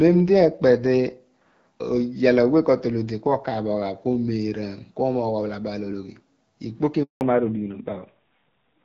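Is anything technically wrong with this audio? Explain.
Yes, there are three faults in this speech clip.

At 5.25 s a single sharp click stands out. The likely cause is dropped samples: a tiny piece of the stream went missing, roughly one sample, about 0.02 ms. The waveform jumps straight from one value to a later one. The loss is far too short to take away any audible sound. That step in the waveform comes through as an isolated, instantaneous tick with a thin vertical line on a spectrogram.

From 7.03 to 7.21 s, just after "ologhi ikpoki", there is a handover gap. The phone switched the call from one network to another, and no speech frames arrived while the switch was underway. The speech fades within a few tens of milliseconds and the line stays silent for about 180 ms until the new link comes up. Whatever was said during that interval is simply missing.

Right after that gap, from 7.21 s to the end, comes a fallback to narrowband. 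Before 7.21 s the call carries the fuller band of the AMR wideband (HD Voice) codec at 12.65 kbit/s with only light coding wear. After the handover the content stops dead at 4 kHz, which points to an older narrowband codec at a low rate such as 7.4 kbit/s. The speech turns duller and rougher for the final stretch.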